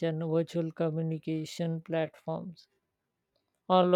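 A speech clip with a time-stretched section from 0.8 s to the end. The pace drops abruptly to about 0.74 times normal speed, but the pitch stays put. The slowed sound drags. Software likely stretched it by repeating short pieces.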